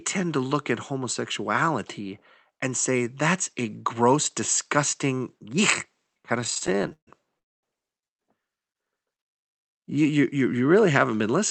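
From 6.41 to 7.09 s, just after "gross disgusting yuck kind", the speech drags and stutters, broken by 15 short gaps filled with continued sound, the longest about 141 ms, covering roughly 44% of that stretch. These are repeated stalls (stutter): packets arrived late, the jitter buffer kept running dry, and the receiver stretched the last sound each time, losing nothing. From 7.39 to 7.65 s the audio stops and drops almost entirely to silence for about a quarter of a second before resuming exactly where it left off. This is likely a call audio freeze, with packets held up in transit so the buffer emptied and the receiver faded its continuation out until they arrived, inserting a gap of about 239 ms.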